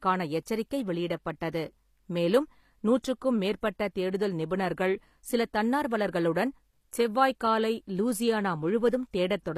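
Throughout the speech there is plainly audible codec damage, most likely from HE-AAC compression at a low rate, which fits a bitrate around 24 kbps. The encoder codes only the lower spectrum and rebuilds the treble by copying lower bands upward under a coarse envelope, so the upper harmonics are synthetic and do not line up with those below the crossover. On a spectrogram the treble looks smoothed and patchy, and nothing appears above 14.9 kHz.

At 3.03 s, between "வெளியிடப்பட்டது மேலும்" and "மேற்பட்ட தேடுதல் நிபுணர்கள்", there is a pre-echo lasting about 14 ms. A sharp attack fell late in a transform block, and the quantisation noise sized for that loud onset was spread across the whole block, including the quiet moment before it. It is heard as a brief hiss that leads in to a softened, smeared attack. On a waveform, low-level noise rises just ahead of the onset, and a spectrogram shows a thin broadband smear before the transient.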